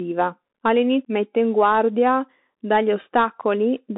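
From start to finish the speech carries Bluetooth CVSD headset codec damage: the band runs roughly 250 Hz to 3.7 kHz, with nothing above 3.8 kHz. The one-bit delta coder's adapting step lags loud high content, giving scratchy s sounds and a granular hiss, consistent with a 64 kbps CVSD link.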